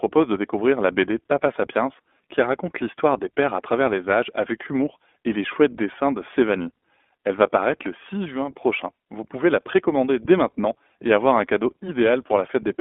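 Throughout the speech, the sound is thin and boxed in, cut off below 250 Hz and above about 3.5 kHz, with a plainly rough, slightly synthetic grain. This is the iLBC codec, coding each 20 ms frame on its own, which fits its 15.2 kbps mode.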